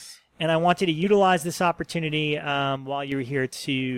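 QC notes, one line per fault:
2.77–3.12 s, one channel drops out: the level falls abruptly by about 6 dB, then recovers. Likely one stereo channel was lost, halving the mono sum.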